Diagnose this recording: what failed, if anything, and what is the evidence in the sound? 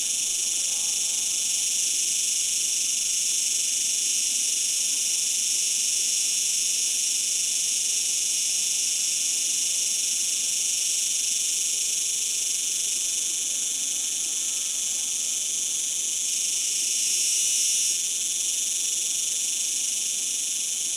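Nothing in the signal chain points to a failure: level, continuity and timing hold steady throughout, with no dropouts, discontinuities or distortion that would implicate any stage.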